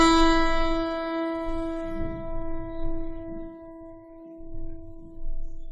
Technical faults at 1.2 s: transcoding between lossy codecs

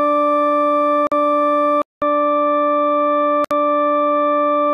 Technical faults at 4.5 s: input switched to a poorer device

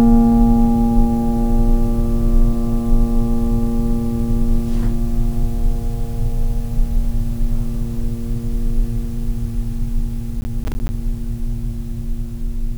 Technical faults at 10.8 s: processor overload crackle

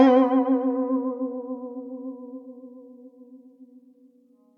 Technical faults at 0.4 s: none

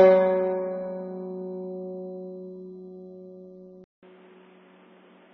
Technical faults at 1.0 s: AAC compression

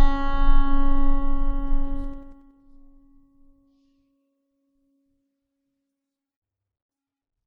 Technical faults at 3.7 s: MP3 compression

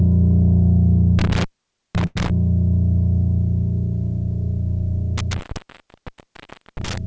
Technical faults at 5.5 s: intermittent contact

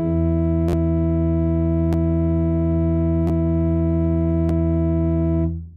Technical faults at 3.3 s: repeated buffer

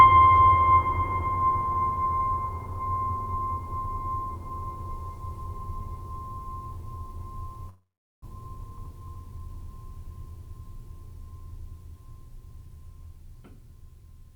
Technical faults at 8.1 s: long network dropout

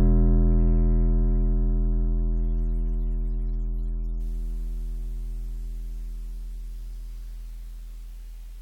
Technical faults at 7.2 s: none

